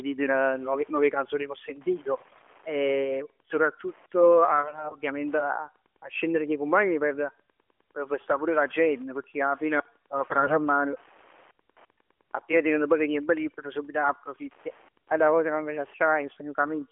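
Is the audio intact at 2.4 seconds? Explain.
No, 2.4 s falls inside a burst of AMR bit errors running from about 2.18 to 2.42 s. The link was flipping roughly one bit in ten in the less protected parts of each frame, so the decoder's excitation pulses land wrong and the speech turns hoarse and gargly while keeping its rough pitch and level.

Underneath that, there's Wi-Fi interference throughout the clip. A nearby radio's beacon every 102.4 ms gets rectified into the audio circuit, giving a faint, steady tick about ten times a second, sitting well below the speech. It's present at 2.4 s too.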